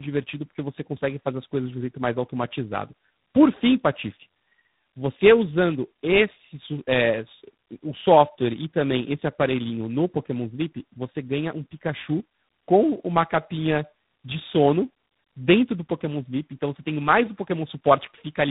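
Throughout the clip, the speech shows tandem speech coding. It sounds like two low-rate speech codecs in a row, perhaps G.729A and then G.726. The second recoded the first's damaged output. The voice turns rough, muffled and warbly. Nothing reaches above 3.8 kHz.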